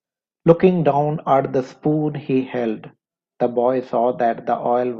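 No faults are audible anywhere in the speech; nothing in the signal chain breaks down at any point.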